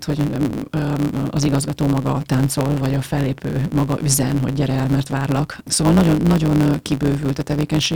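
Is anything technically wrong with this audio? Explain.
Yes. A block size mismatch (truncated) runs throughout the speech. One stage hands over blocks about 9 percent longer than the next stage reads, so the tail of every block is discarded. Each cut falls about 9.2 ms apart, producing a steady 109 Hz buzz under the speech. Because a slice of audio is lost at every block, the speech moves about 1.09 times faster than normal while keeping its timbre.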